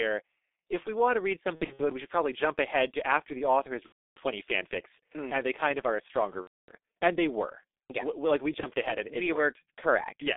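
G.723.1 codec damage runs through the whole speech recording: heavy coding at about 6.3 kbit/s squeezes the sound into a 300 Hz to 3.6 kHz telephone band. The slow, frame-based voice model leaves it muffled and hoarse, with smeared consonants. VoIP packet loss concealed by the speech codec occurs at 1.56 to 1.82 s (scattered gaps whose longest run is 60 ms), 3.86 to 4.17 s, 6.41 to 6.72 s and 8.60 to 8.66 s. In each gap the decoder extends its last pitch and filter, lowering the gain as it goes.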